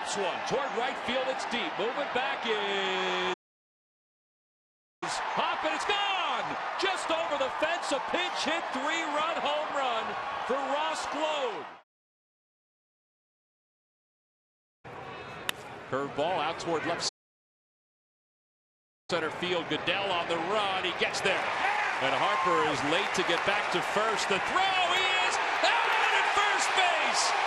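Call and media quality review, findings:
Playback stall, 3.33–5.03 s. Output drops to silence for about 1.7 s mid-flow. Audio then resumes. Likely cause: player buffer underrun or blocked audio thread, leaving nothing to render.

Playback stall, 17.08–19.10 s. Second dropout, silent for 2.0 s. Same signature. Probable component: playout buffer or render thread starved, then recovering.

Time-compressed catch-up, 5.03–8.03 s. Audio runs hurried at 1.15x, pitch unchanged. Player drains the backlog from the first stall by splicing out short segments and cross-fading the joins.

Time-compressed catch-up, 19.10–22.10 s. Sped up at 1.1x for 3 s, pitch held. Same backlog-shortening mechanism after the second stall, slightly gentler rate.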